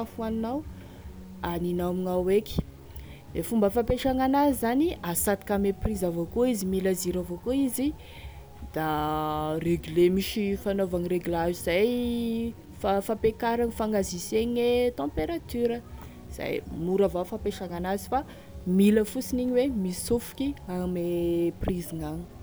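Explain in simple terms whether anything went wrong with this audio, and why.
Yes, a grainy roughness rides on the speech throughout, most likely low bit depth without dither. Unlike steady hiss, it follows the voice and fades into crackle or silence in quiet moments.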